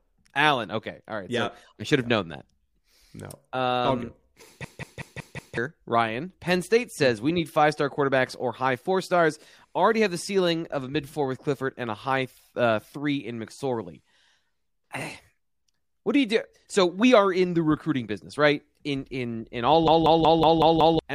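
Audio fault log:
4.64–5.57 s and 19.88–20.99 s, system hang loop: A hard, mechanical stutter replaces the speech, with one fragment of about 0.19 s repeating exactly, 5 times in the first event and 6 times in the second, just after "in in all". The repeat rate is 5.38 Hz, which fits an 8192-sample buffer. The system stalled while the sound hardware kept replaying the same ring buffer, so about a second of audio is lost each time.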